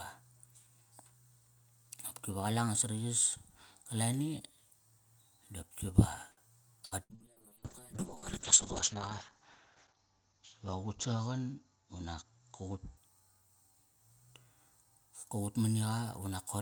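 Short stall from a late packet, 6.31 to 6.40 s. A packet was late, so the jitter buffer ran dry, and the receiver stretched the last bit of speech for about 58 ms until the packet arrived, then carried on from the same point. Nothing is lost. A sound is simply held a little too long with a faint buzzy sustain, and everything after it is pushed about 58 ms later.

Burst of packet loss, twice: 6.85 to 6.94 s and 7.03 to 7.18 s. Each time, a run of consecutive packets failed to arrive in time to be played, and the receiver extended the preceding sound while fading it down. The first fill lasts about 59 ms, the second about 65 ms, and about 60 ms of speech is gone in each. The held sound fades, then the speech jumps ahead past the missing part.

Call bitrate drop, 7.14 to 13.09 s. The call's bandwidth estimate collapsed, and the encoder was pushed down to a far lower bitrate, which fits a fall from around 64 kbps to around 6 kbps. 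The audio bandwidth narrows from 20 kHz to 8 kHz, so the speech becomes muffled and coarse, with a rough, watery texture. It is at its worst for about 1.4 s before recovering near the end of this stretch.

Jitter buffer speed-up, 11.76 to 12.39 s. Too much audio had piled up in the buffer, so the receiver trimmed it by cutting out many short pitch-period-sized pieces in a row, around 70 ms in all. The speech plays roughly 10% faster at unchanged pitch and sounds rushed. This happens while the bitrate is still reduced.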